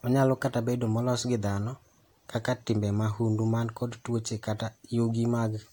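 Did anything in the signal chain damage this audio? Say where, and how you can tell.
No, nothing in the signal chain has left an audible mark on this speech recording. No stage, from capture through to playback, shows any sign of having damaged the audio.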